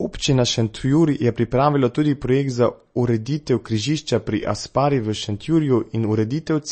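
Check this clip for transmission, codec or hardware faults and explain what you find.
One fault runs through the whole speech clip: plainly audible lossy coding, most likely MP3 compression at a low rate, which fits roughly 32 kbps. Short of bits, the encoder discards all treble above 8.3 kHz and zeroes weaker frequency lines that switch on and off from frame to frame, giving the speech a watery, swirling quality with smeared onsets. On a spectrogram the energy stops at a flat ceiling near 8.3 kHz, with patchy, flickering gaps below it.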